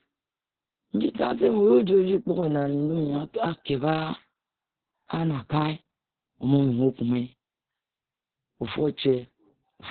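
Opus voice compression runs throughout the speech, with nothing above 4.4 kHz. The narrowband SILK coding and coarse excitation leave it muffled, hoarse and slightly robotic, heavy damage that fits a very low bitrate of around 6 kbps.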